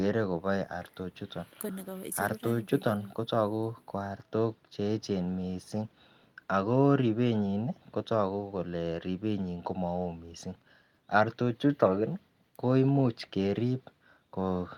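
No technical faults can be heard in the speech; the signal stays continuous and intact throughout.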